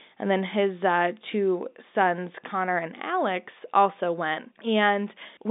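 No technical faults are audible anywhere in this speech.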